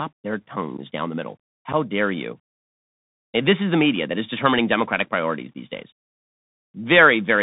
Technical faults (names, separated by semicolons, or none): Bluetooth CVSD headset codec; unconcealed Bluetooth headset packet loss